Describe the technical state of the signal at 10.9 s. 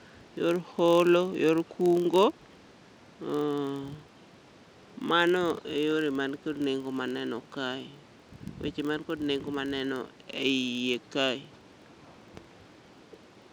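At 10.9 s the speech carries a steady low buzz of regular ticks near 43.1 Hz, rising and falling with the speech level, as it does for the whole clip. The cause is a filter restarted on every block: it loses its state and starts each block from silence, leaving a small transient at each boundary. The repeat rate fits a 1024-sample block.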